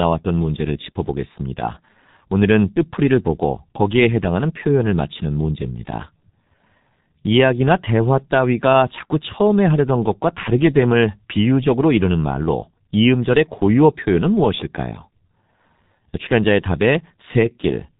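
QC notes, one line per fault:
Throughout: G.723.1 codec. The speech is band-limited, with nothing above 3.8 kHz, so it sounds muffled and dull. Heavy coding damage makes it hoarse and blurs the consonants. The codec encodes speech in 30 ms frames and updates its model of the vocal tract only once per frame, so fast articulation smears. The degree of roughness fits a very low bitrate of around 6 kbit/s, with too few bits to carry fine spectral detail.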